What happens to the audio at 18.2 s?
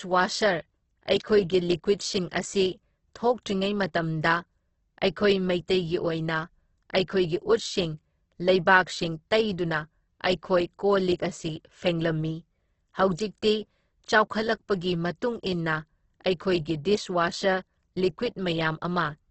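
At 18.2 s you're hearing the same heavy damage that runs through the whole clip: the speech sounds grainy, rough and noisy, with nothing above 8.2 kHz. That's likely Opus compression working in its CELT mode at a very low bitrate, somewhere around 12 kbps. Short on bits, the encoder keeps each band's energy but fills in detail by folding lower bands or with noise, so the speech comes out gritty rather than hollow or swirly.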